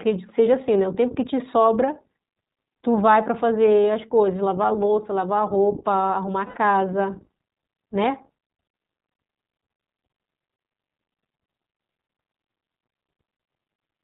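Throughout, the speech sounds band-limited, with nothing above 4 kHz, and plainly rough and slightly synthetic. This is the iLBC codec at work: a narrowband VoIP coder that codes each short frame independently, and the damage here fits roughly 15.2 kbps with 20 ms frames.

At 3.84 s there is a brief buzzy hold in the voice, and from 6.46 to 6.58 s a longer one of about 100 ms that fades as it goes. These are lost iLBC frames: the decoder filled each gap by repeating the last pitch cycle mixed with noise. Because the frames stand alone, the speech recovers cleanly right after each gap.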